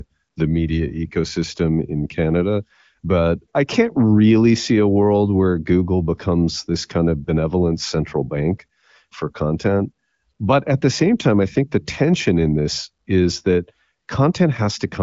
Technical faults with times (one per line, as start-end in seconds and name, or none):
none